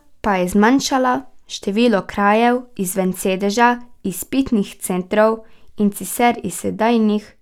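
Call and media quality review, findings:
Nothing stood out on listening to the speech in this recording.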